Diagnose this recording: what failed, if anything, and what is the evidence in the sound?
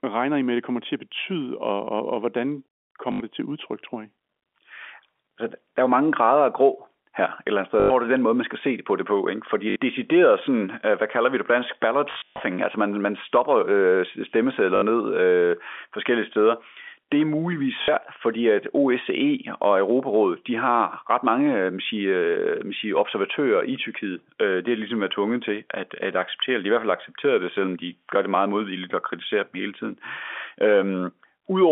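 Network stage: packet loss with last packet repeated. Robotic stutters occur at 3.12 s (80 ms), 7.8 s (100 ms), 9.7, 14.76 and 17.82 s (60 ms each), and at 12.12–12.4 s (220 ms, scattered). Each buzzes at about 50 Hz, which fits 20 ms packets. Repeated sound, rather than silent gaps, distinguishes this from plain dropouts.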